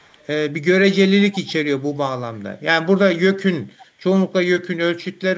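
Speech with an echo leak: very faint copies trailing by 0.33 s at 0.00–0.26 s and 3.80–3.86 s, visible as weak ghost traces on a spectrogram, likely from incomplete echo cancellation.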